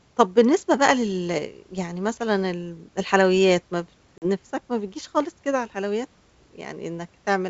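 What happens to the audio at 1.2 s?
Nothing goes wrong at 1.2 s: the speech passes through intact, with the G.722 wideband telephone coding at 64 kbit/s leaving at most a faint trace.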